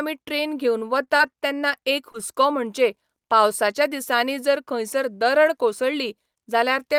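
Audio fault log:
1.05–1.72 s, repeated packet loss (robotic sound): after "ट्रॅन घेवन", five short holes, none over 21 ms, are each patched by extending prior speech, giving a recurring choppy, robotic texture rather than one isolated smear.
2.12–2.16 s, short concealed packet loss: a single 20 ms hole just before "म्हणचे पावसाच्या" is bridged by continuing the preceding sound, heard as one brief smear, not a repeating pattern.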